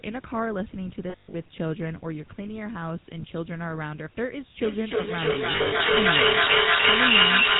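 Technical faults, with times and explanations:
Throughout, GSM full-rate codec: speech is cut off above 4 kHz with a buzzy, gravelly roughness from pulse-driven excitation, which fits 13 kbps full rate rather than plain band-limiting.
1.1 to 1.35 s and 5.52 to 5.83 s, lost GSM frames: short stretches freeze into a rough metallic ring as the last good frame is held and faded. The gaps are scattered, not one silent dropout.
4.61 s to the end, feedback echo between two devices: speech returns about every 0.3 s, thinner and ringing, and peaks about 14 dB above the speech, so repeats pile up instead of decaying like room reverb.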